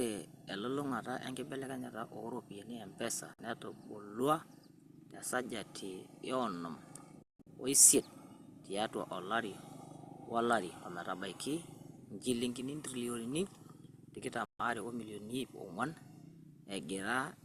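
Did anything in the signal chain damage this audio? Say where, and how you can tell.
Yes, a digital broadcast dropout at the reception stage: the speech mutes with quick fades at 3.34 s (about 48 ms), 7.22–7.47 s (several short holes, longest about 168 ms) and 14.45–14.6 s. The receiver lost or rejected frames and muted until clean ones returned.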